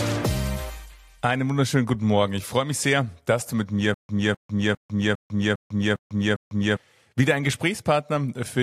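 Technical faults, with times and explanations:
3.94 to 6.77 s, stutter with silent gaps: a 255 ms burst of sound plays seven times, each followed by about 148 ms of dead digital silence, so it returns on a steady 403 ms cycle while the audio that belonged in that stretch never arrives. This is likely a stalled player or stream replaying its last buffered fragment at each retry and then running dry. The true silence between identical repeats sets it apart from a seamless loop, and the strict regularity separates it from random dropouts.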